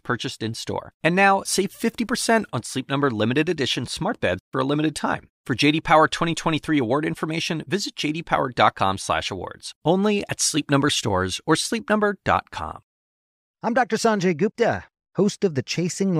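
No technical faults can be heard anywhere in this speech recording.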